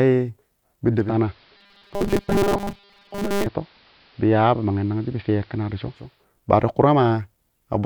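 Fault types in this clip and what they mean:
Digital radio blending to analogue: From 0.86 s to 6.28 s the speech turns dull and hissy, with a level drop of about 2 dB. The receiver lost its digital stream and cross-faded over about 0.35 s to the station's AM broadcast, then back.
Robotic sound from repeated short buffers: Between 1.57 s and 3.46 s the speech becomes a stiff metallic buzz locked at 200 Hz, only loosely tracking the words. The likely cause is audio arriving too rarely, so a 5 ms slice is looped and most of the real signal is skipped.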